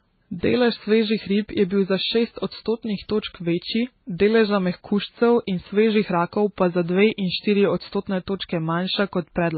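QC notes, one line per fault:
throughout: transcoding between lossy codecs. The speech was likely encoded at a very low bitrate, then re-encoded twice more, ending in WMA 1. Nothing remains above 4.6 kHz, and the earlier stages' artefacts persist beneath the final codec's own.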